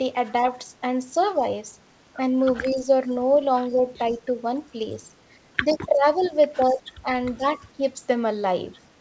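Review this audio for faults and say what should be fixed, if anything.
Speech suppressed in double talk dips the level at 1.38–1.47, 2.62–3.12, 3.7–4.15 and 5.65–7.84 s, by up to about 20 dB in the last span. It is likely an echo canceller turning both talkers down. Better double-talk detection in the canceller would prevent it.

Echo leak, likely from an echo canceller that let loudspeaker echo through, returns faint 122 ms copies, about 20–35 dB below the speech, at 2.58–2.75, 4.11–4.17, 5.73–5.78 and 6.21–6.29 s. The fixed delay separates these copies from room reverberation. A longer, better-converged echo canceller filter on the loudspeaker side would stop them.

Nothing is heard above 8 kHz, which fits G.722 at 64 kbps.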